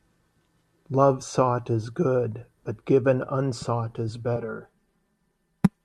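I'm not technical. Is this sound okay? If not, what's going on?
No. Channel delay (comb filtering) from 4.36 s to the end: one side arrives roughly 5 ms late, so mixing cancels evenly spaced pitches, making the speech sound hollow.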